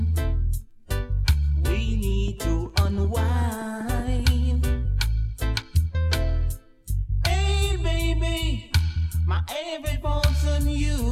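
A steady ticking runs over the sound from 2.28 s to 4.21 s, about ten similar pops arriving evenly at 5.2 per second and roughly as loud as the audio itself. This train of clicks likely comes from electrical interference or a faulty connection or power supply injecting repeated pulses.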